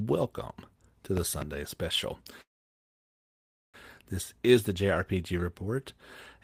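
Between 1.17 and 1.44 s, two loud pops jump well above the speech, likely an electrical transient. The waveform shows two tall spikes, and the spectrogram shows full-height vertical lines.

From 2.41 to 3.77 s, a call audio freeze, likely from delayed packets, fades into about 1.3 s of silence before the speech resumes with nothing lost. The waveform flatlines and the spectrogram goes blank.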